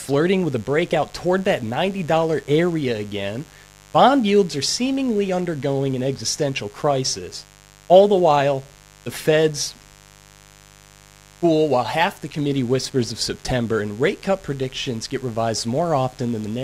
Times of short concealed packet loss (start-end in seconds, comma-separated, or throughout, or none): none